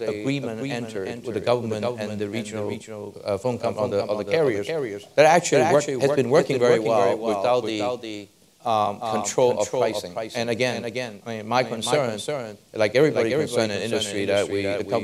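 The audio was likely picked up a second time through a slower path, or an edit left two misaligned copies in place, so the clip carries a doubled audio track from start to finish. A full-band duplicate trails the original by roughly 0.4 s at around 5 dB lower level. With no decay or room colouring, it sounds like a dry, distinct repeat rather than reverb, stacking every sound onto a delayed copy of itself.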